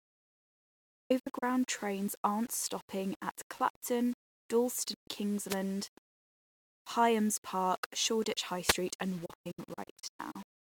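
From the very start the speech has a gritty, grainy edge that rides along with it, worst on the quiet tails where the sound sputters or drops out between steps. That's low bit depth without dither: the error sits roughly 25 dB below the signal and follows it rather than hissing steadily, which fits a likely cause of rounding to about 7 bits with no dither.

Then come three digital broadcast dropouts, where the receiver mutes after losing frames, each hole fading out and back in over about 8 ms. From 0.58 to 1.43 s it's a stuttering cluster, around 0.42 s lost across 0.83 s in holes of up to 96 ms, clearing just before "trains aren't stopping at". A single short gap of about 0.13 s hits at 4.94 to 5.08 s. From 9.26 to 10.42 s there's another broken-up stretch, about 0.48 s missing over 1.15 s, again in chunks of up to 96 ms.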